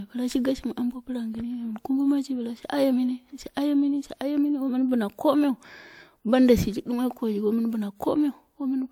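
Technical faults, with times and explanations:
Throughout: transcoding between lossy codecs. The speech carries two overlapping layers of coding artefacts, likely an MP3 encode near 96 kbit/s followed by WMA at a similar rate. The second encoder spends bits re-coding the first one's artefacts and adds its own, and nothing remains above 20.1 kHz.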